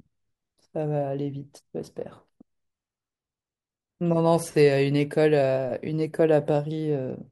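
No technical faults are audible anywhere in the speech recording.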